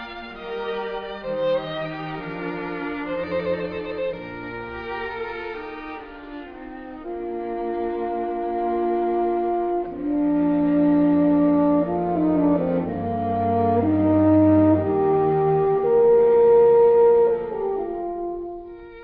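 No technical faults can be heard in this audio. Nothing in the sound stands out as a problem at any point.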